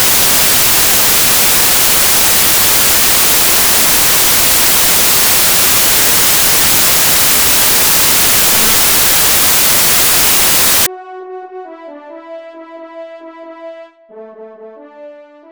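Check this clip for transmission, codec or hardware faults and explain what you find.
From 0 to 10.86 s the samples are built from the wrong bytes: misassembled byte order promotes noisy low bits, producing loud white noise.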